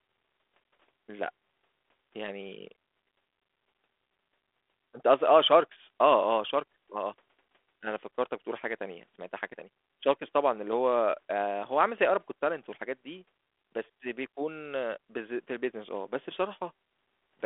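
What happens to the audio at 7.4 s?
Nothing goes wrong at 7.4 s: the speech carries on intact through that moment, with only the narrow telephone band and light coding texture of the 32 kbit/s G.726 ADPCM path that runs under the whole recording.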